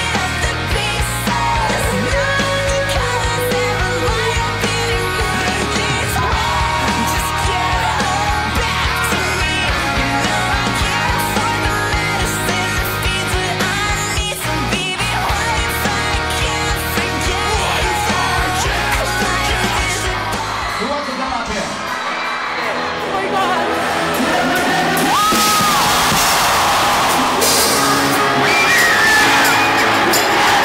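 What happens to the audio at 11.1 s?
Nothing goes wrong at 11.1 s; the audio carries straight through that moment intact, with no dropout, click or distortion.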